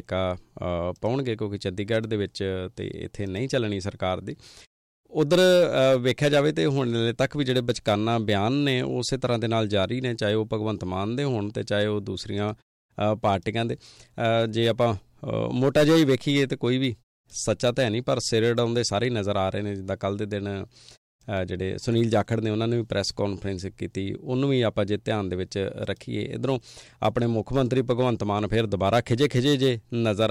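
The clip is speech, and nothing is technically wrong with it.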